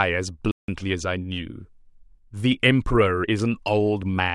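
From 0.51 to 0.68 s, a block of digital silence: an unfilled buffer (fitting 4096 samples) leaves a 170 ms hole, cutting out and back with no fade.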